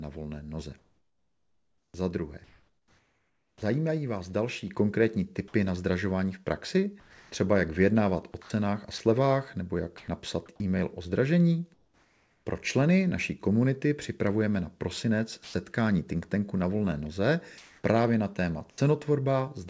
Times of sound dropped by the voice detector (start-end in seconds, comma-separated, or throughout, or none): 7.00-7.32, 15.44-15.54, 18.70-18.78